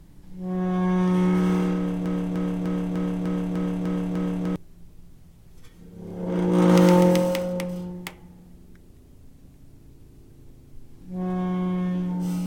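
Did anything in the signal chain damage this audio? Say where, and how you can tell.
Yes. From 2.06 to 4.56 s a broken-record loop repeats one 0.3 s fragment exactly, eight times back to back. The audio that belonged there is gone. That points to a likely stall in the playback or stream buffer, which kept resending its last block. Unlike a stutter or dropout, the repeats are identical and leave no gap.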